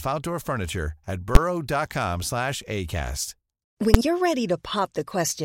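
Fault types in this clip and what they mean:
Invalid numbers at full scale: a processing calculation has produced infinite or undefined values, and the output is forced to the maximum positive or negative level for a whole processing block. In this speech clip the blocks are very short, so each is heard as a single sharp bang rather than separate pops, at 1.35 s and 3.94 s. The first lasts about 12 ms, which fits a 512-sample block, and the second about 6 ms, which fits a 256-sample block.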